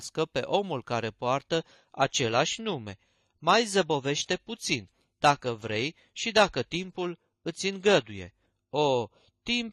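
At 1.46 s, just after "pe omul care", the speech switches to an adaptive stream at a lower bitrate until the end. Nothing survives above 14.1 kHz and codec artefacts thicken, which fits a step from 96 to 32 kbit/s. Unlike a dropout, the change is instant and gapless.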